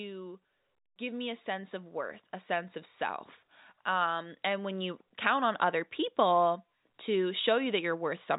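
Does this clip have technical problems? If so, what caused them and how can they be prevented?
Yes. Automatic gain rising occurs from 3.86 to 5.06 s, between "of self" and "count on other people". The gain control judged the input too quiet and raised it. The speech and the background swell together by about 4 dB over that span. Fixing the input level and disabling automatic gain control would prevent it.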